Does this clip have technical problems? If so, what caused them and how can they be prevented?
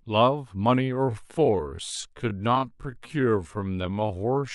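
Yes. From 0.91 s to the end at 4.55 s there is a time-stretched section: the speech suddenly slows to about 0.59 times its pace and drags, likely from software repeating short pieces to lengthen it. The pitch stays unchanged, unlike a slowed playback, which would also drop lower. To prevent it, fit timing by editing or re-recording instead of stretching audio this far.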